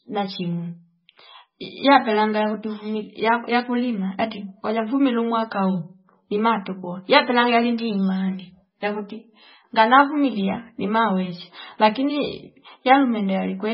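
Throughout the speech, nothing is heard above 5.6 kHz. The sound is watery and swirly, with metallic chirps on s sounds. This heavy damage is likely MP3 compression. Short of bits, the encoder cut the treble and zeroed weak lines, which fits 16 kbps.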